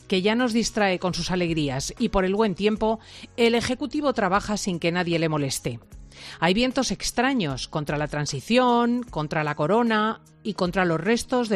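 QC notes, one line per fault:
No faults found. Nothing in the clip needs a flag.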